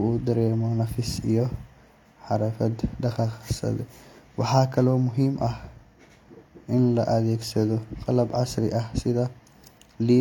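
Throughout the speech, everything above 18.4 kHz is missing, and two different kinds of compression damage sit on top of each other: smeared, swirly high frequencies alongside a grainy, warbling coarseness. That layering is the sign of transcoding between lossy codecs. The sound points to an MP3 stage at around 96 kbit/s, likely followed by HE-AAC at around 40 kbit/s, which spent its small budget re-encoding the first codec's errors. A single low-bitrate encode would show one consistent artefact type.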